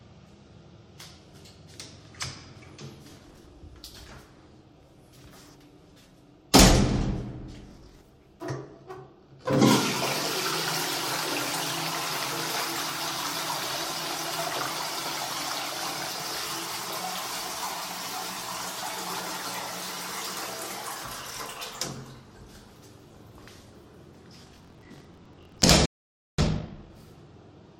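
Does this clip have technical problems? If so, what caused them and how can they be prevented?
Yes. Gritty, tearing processor overload crackle rides on the sound from 3.10 to 3.46 s, 7.69 to 8.01 s, and for longest from 24.43 to 25.69 s. The processor missed many buffer deadlines in a row, roughly 15, 20, and then 70. Each miss replayed a hard-edged scrap of old audio, and the scrap length fits buffers of around 10 ms. Keeping the processing load within budget, or using a larger buffer, prevents this.

At 25.86 s the sound cuts out completely for 0.53 s, a playback stall, until 26.38 s. The player was likely starved of data or had its thread blocked, so the output went silent until it recovered. Deeper buffering and keeping blocking work off the audio thread prevent this.

From 26.38 to 26.90 s the sound rushes at 2.0 times normal speed but keeps its pitch. This time-compressed catch-up trims the backlog from the stall by cutting small pieces and cross-fading across them. 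Preventing the stall removes the need for this catch-up.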